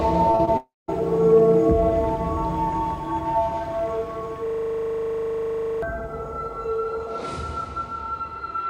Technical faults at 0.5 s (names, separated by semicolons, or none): short concealed packet loss; long network dropout